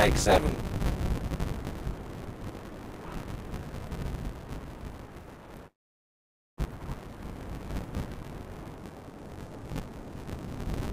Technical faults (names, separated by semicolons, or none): buffer tearing; long network dropout; section at the wrong speed